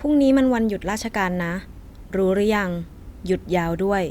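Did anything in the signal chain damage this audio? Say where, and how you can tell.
No, nothing in the signal chain damaged this audio.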